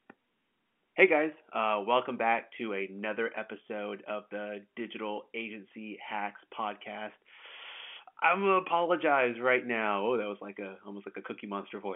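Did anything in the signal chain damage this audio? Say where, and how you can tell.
No, nothing in the signal chain damaged this audio.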